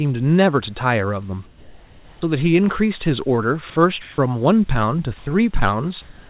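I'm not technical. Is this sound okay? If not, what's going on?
No. In the pauses at 1.46 to 2.22 s, 4.02 to 4.18 s, 5.18 to 5.26 s and from 6.02 s to the end, the real room background is swapped for a flat, featureless hiss. This is comfort noise in place of the background, likely because the call stopped sending sound during silences. Unlike a dropout, these gaps never go dead.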